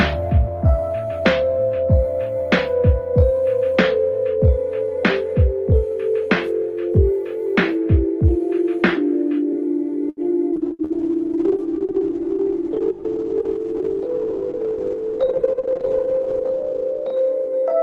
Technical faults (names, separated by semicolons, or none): repeated packet loss (robotic sound); call bitrate drop; jitter buffer slow-down; jitter buffer speed-up